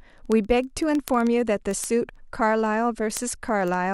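A receiving device running on its own clock, a few hundred ppm off the sender's, causes word clock ticks in this speech clip: sharp, uneven single-sample ticks roughly every 0.07 s from 0.13 s to the end.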